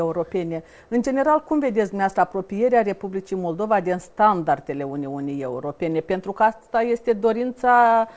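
Nothing stood out on listening: the sound arrives over a WebRTC call path using the G.722 codec, with nothing above 8 kHz.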